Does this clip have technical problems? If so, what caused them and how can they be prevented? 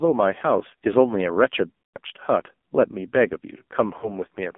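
Yes. The AMR narrowband mobile codec shapes the whole clip: speech is confined to roughly 200 Hz to 3.6 kHz, and heavy coding damage makes it buzzy and synthetic, which points to a low rate near 5.9 kbps. A spectrogram shows a hard ceiling with nothing above 3.6 kHz, and the harmonics look smeared. Prevention: carry the call over a wideband codec such as AMR-WB, or at least use a higher AMR-NB mode.

Lost AMR speech frames occur from 1.82 to 1.97 s and from 3.98 to 4.15 s. The decoder repeated the last good pitch and vocal tract settings while lowering the gain. Speech smears into a held, warbling tone and then fades, returning weak or rough. This fits about 120 ms of lost frames in the first event and 40 ms in the second. On the waveform, the envelope freezes and then decays toward silence, while a spectrogram shows flat, stretched harmonics. Prevention: improve radio coverage or signal quality so frames arrive with valid checksums.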